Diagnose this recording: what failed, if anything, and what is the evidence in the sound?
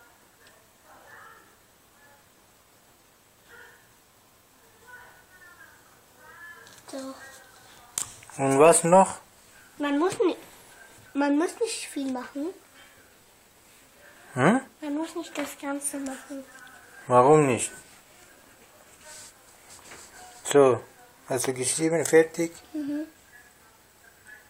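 No audible faults detected.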